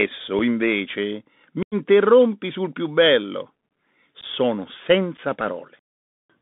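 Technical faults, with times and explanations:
Throughout: Bluetooth CVSD headset codec. The speech is confined to a telephone band of roughly 150 Hz to 3.7 kHz, so it sounds thin and boxed. The codec sends one bit per sample at 64 kHz, saying only up or down, with a step size that adapts. When the waveform climbs faster than the step can follow, it overloads. That makes s sounds scratchy, distorts louder passages, and leaves a granular hiss under the speech.
0.39, 1.63–1.75, 4.21–4.24 and 5.17–5.19: unconcealed Bluetooth headset packet loss. Audio between headset and phone dropped out, and nothing was patched in to cover the gaps. The first and last holes are about 7.5 ms each, which fits a single lost packet. The third is 15 ms. The second runs 90 ms, which points to about ten packets lost in a row. Each gap has hard edges, and the speech returns briefly quieter as the CVSD step rebuilds.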